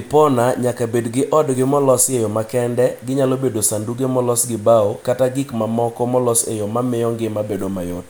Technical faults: none

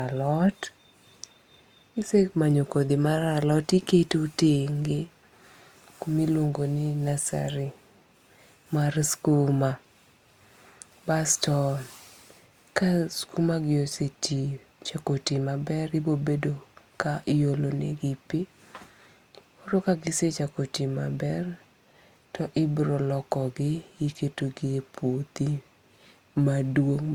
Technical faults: transcoding between lossy codecs

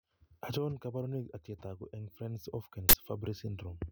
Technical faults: uninitialised buffer

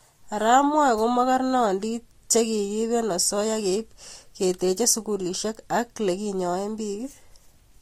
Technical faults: transcoding between lossy codecs

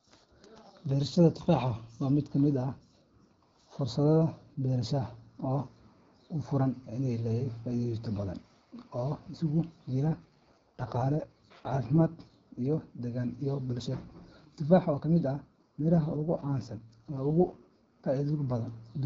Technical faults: AMR rate drop

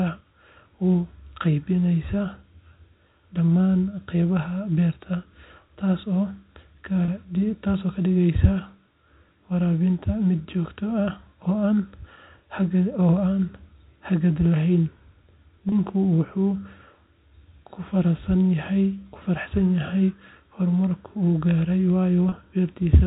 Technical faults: packet loss with pitch repetition

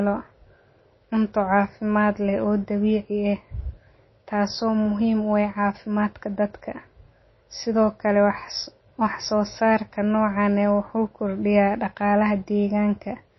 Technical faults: MP3 compression

